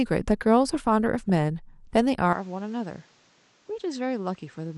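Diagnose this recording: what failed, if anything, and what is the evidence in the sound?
The whole clip sounds dull and plainly gurgly, with a grainy edge on the speech and upper detail that flickers in and out. That points to a codec-stage problem, likely MP2 compression at around 80 kbps. At that rate, MPEG Layer II has too few bits for its 32 sub-bands, so it drops the upper bands intermittently and quantises the remaining ones coarsely. The result is the plainly audible granular smearing heard here.

At 1.29 s there is a brief burbling glitch that sits on top of the programme and then clears. This is DAB burbling, a transmission-stage fault. Weak reception let a small fraction of a percent of bit errors slip past the error correction into the MP2 stream. The corrupted samples put short blips of noise into single sub-bands before the decoder recovers.

From 2.33 s to the end, the sound abruptly becomes quieter, by about 10 dB, and boxier, with no gap at the change. 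Nothing is audible above 8.2 kHz, and a new noise floor appears about 30 dB below the speech. This is an input switched to a poorer device at the driver or input stage, likely a change to a narrower-band microphone or a headset profile, with its own tone, gain and self-noise.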